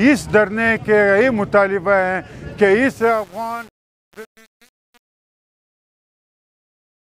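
From about 2.87 s to 7.17 s, the fade-out's gain stage keeps too few bits and adds no dither, consistent with roughly 7-bit resolution. This is truncation distortion on a fade: as the level drops, the waveform collapses into coarse steps, so the quiet tail turns gritty.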